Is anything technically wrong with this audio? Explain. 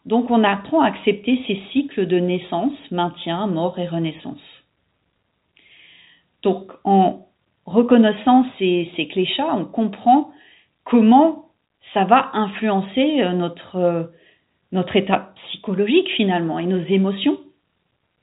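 No, nothing technically wrong can be heard here.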